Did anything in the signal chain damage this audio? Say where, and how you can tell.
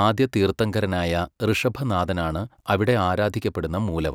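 No, nothing in this speech recording stood out as damage from any stage of the signal chain on listening.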